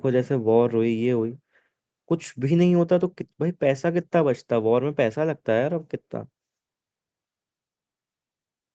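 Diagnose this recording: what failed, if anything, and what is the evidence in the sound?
Nothing stood out on listening; the speech comes across as a normal call recording, with its top end stopping at about 8 kHz as the call path's codec and microphone processing would leave it.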